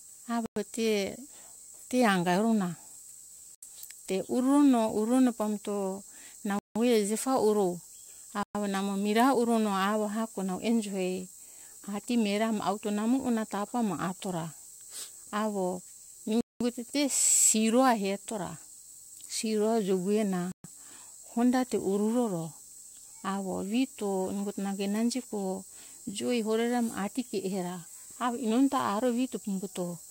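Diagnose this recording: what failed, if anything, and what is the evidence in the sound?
Playback-stage dropouts: speech cuts to silence at 0.46, 3.55, 6.59, 8.43, 16.41 and 20.52 s, gaps of 78 to 198 ms, before resuming. The waveform shows flat silent blocks, and the spectrogram shows full-band empty columns. Likely a Bluetooth stall: interference delayed packets and the receiver's buffer ran dry.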